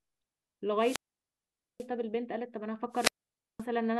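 At 0.78 s the speech thins into a brief surge of hiss, then drops to near silence for about 0.84 s before returning around 1.88 s. The same pattern recurs from 2.91 s, with a mute of about 0.52 s ending near 3.65 s. Both are wireless microphone squelch dropouts: the FM radio link weakened until the receiver's squelch judged the signal too poor and shut its output, reopening once reception recovered.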